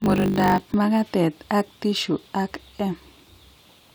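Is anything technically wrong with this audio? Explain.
Yes. From 0 to 0.75 s there is a block size mismatch (truncated). Block ends are discarded, which fits 1024-sample blocks. This gives a 50 Hz buzz and speech running 1.07 times fast with its timbre unchanged.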